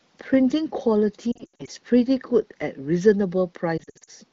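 Radio errors corrupted AMR speech frames in this speech clip, and the decoder filled each gap by reusing the last good pitch and vocal tract settings at falling gain. The lost AMR speech frames add up to about 400 ms in two clusters, one from 1.31 to 1.70 s and one from 3.77 to 4.11 s. Each stretch warbles and dips repeatedly. The longest gaps, 80 ms and 60 ms, smear and fade quickly, as wideband concealment does, and the voice comes back briefly rough. The AMR-WB coding at 15.85 kbit/s adds only light texture.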